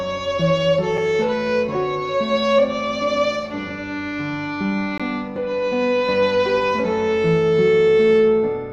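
At 0.97 s and again from 4.98 to 5.00 s there's a gap between stream segments: mismatched timestamps four seconds apart leave hard-edged silent holes, roughly 4 and 18 ms, with nothing lost.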